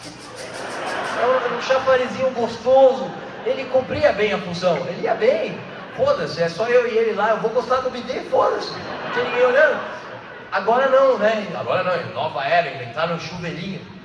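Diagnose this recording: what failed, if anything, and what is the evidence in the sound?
Nothing stood out on listening that would point to a failure at any stage of the chain.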